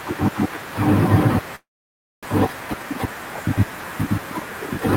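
At 1.55 s the speech cuts out and doesn't really return until 2.27 s, which sounds like a long network dropout, likely a stretch of packets that never arrived. The receiver tries to carry the last sound forward as a fading buzz, but most of that gap, about 590 ms, ends up just silent. When the talker comes back, roughly 600 ms of speech is simply gone, and playback sits around 70 ms later than before.

Right after that, from 2.48 s to 3.15 s, you get a jitter buffer speed-up. Having built up extra delay, the receiver trims it back by snipping out tiny pitch-period-sized slices over and over, about 50 ms in total. The pitch stays put, but the speech runs at about 106% speed, so that stretch comes across a little rushed before it settles.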